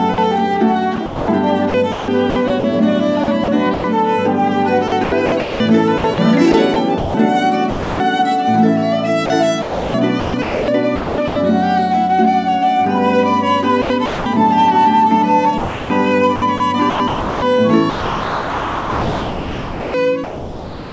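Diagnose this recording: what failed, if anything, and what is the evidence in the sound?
In call processing, the sender's voice detector likely misjudged sound as background. The sound dropped by the voice detector gives way to comfort noise at 0.14–0.18 s and 7.70–8.00 s.

Sound chopped by the voice detector: the detector likely toggled transmission repeatedly at 0.96–2.64, 3.24–3.84, 4.88–7.14, 9.26–11.36, 13.82–14.26 and 15.58 s to the end. The sound breaks up, with stretches replaced by comfort noise.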